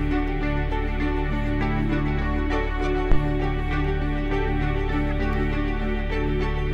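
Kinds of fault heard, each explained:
Phantom power thump: a deep, sudden thump hits the music at 3.12 s, peaking at about -8 dBFS and fading within a tenth of a second on a 22 ms decay. A supply switched on or off on a live input sends its voltage step through the coupling capacitors.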